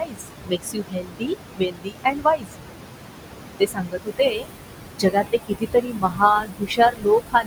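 Right from the start you can hear noise suppressor artifacts: the room noise, only about 5 dB under the speech to begin with, gets pushed down by about 21 dB frame by frame, so it sinks between the words and rises again under them.

On top of that there's speech cut by the noise suppressor at 0.00–1.35, 1.53–2.57, 3.59–4.48, 4.96–6.22 and 6.40 to the end, where it mistakes quiet speech for noise and drops it by about 21 to 22 dB, so consonants and endings sound swallowed.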